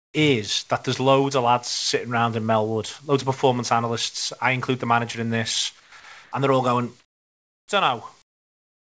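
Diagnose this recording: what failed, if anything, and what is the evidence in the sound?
In call processing, discontinuous transmission has likely replaced the real background with comfort noise in the pauses at 0.0–0.14 s, 6.24–6.32 s, 7.0–7.68 s and 8.22–8.91 s. The background becomes a smoother synthetic noise, dropping by about 20, 3, 16 and 26 dB respectively.

The sender's voice detector likely misjudged speech as background and stopped sending, so the receiver played comfort noise instead. This is the sound dropped by the voice detector: speech gives way to steady noise at 5.80–5.92 s, losing about 80 ms, and again at 6.00–6.04 s, losing about 40 ms. In both cases it returns once the detector triggers again.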